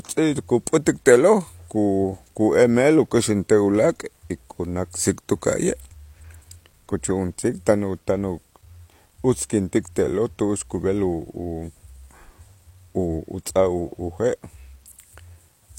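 From start to finish the speech carries low bit depth without dither: it sounds as though it was likely rounded to about 10 bits with no dither added. Because the rounding error tracks the signal, quiet syllables and decays turn grainy, and the error floor sits roughly 40 dB below the speech. On a spectrogram this shows as broadband noise that comes and goes with the voice. A zoomed waveform shows visible stair-steps on low-level passages.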